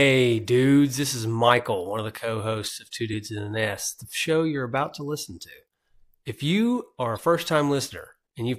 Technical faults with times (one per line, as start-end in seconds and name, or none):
3.10-3.14 damaged data in a compressed stream
7.15-7.19 damaged data in a compressed stream